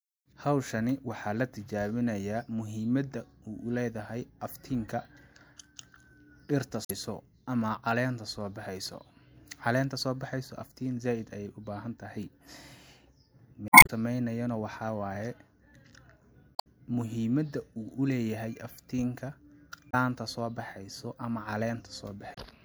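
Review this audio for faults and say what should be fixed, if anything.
Damaged data in a compressed stream makes the decoder misread frames, lose sync and hunt for the next header, leaving brief glitches at 6.83–6.91, 13.68–13.90 (before "sameynayo na"), 16.55–16.67, 19.89–19.94 and 22.33–22.38 s. Fix this by adding checksums and reliable transport for the encoded stream.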